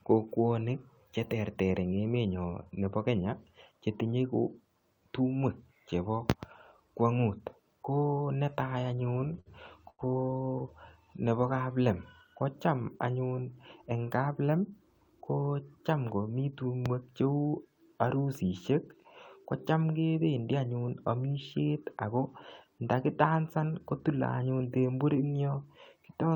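From 9.03 to 9.48 s, just after "tumwek chebokwong'ut ko netai", the speech shows repeated stalls, a stutter. Packets arrived late, and the jitter buffer kept emptying. Six times the receiver held the last sound, about 104 ms in all, with the longest hold 55 ms. The speech drags and judders.

At 9.90 s comes a short stall from a late packet. One packet missed its slot. The receiver stretched the last sound for 88 ms, then resumed where it left off. Nothing is lost, but one sound is held too long, with a slight buzz or dip.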